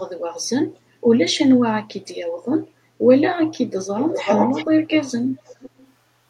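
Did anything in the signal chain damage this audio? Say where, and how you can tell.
Yes. An echo leak at the call-processing stage: a copy of the speech 356 ms late, strong at 3.98–4.66 s and fainter at 4.88–4.95 and 5.46–5.92 s, likely from a far-end loudspeaker its echo canceller missed.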